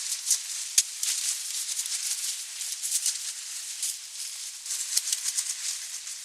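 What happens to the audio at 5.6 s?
Nothing goes wrong at 5.6 s; the sound plays through that moment intact, with no dropout, click or distortion.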